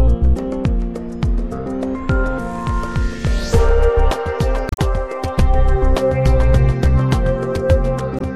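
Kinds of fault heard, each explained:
Damaged data in a compressed stream: corrupted bytes made the decoder misread those frames, lose sync and hunt for the next valid frame header. Two brief glitches result, from 4.69 to 4.79 s and from 8.17 to 8.21 s.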